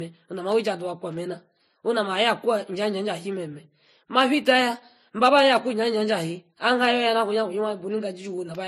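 Throughout the clip, the speech was likely passed through one lossy encoder and then re-encoded by a second, a case of transcoding between lossy codecs. The character suggests a low-rate MP3 stage, around 40 kbit/s, followed by a similarly low-rate Vorbis stage. The second encoder wastes bits reproducing the first one's damage and stacks its own on top, so two kinds of smearing and swirly artefacts are heard at once, with nothing above 14.3 kHz.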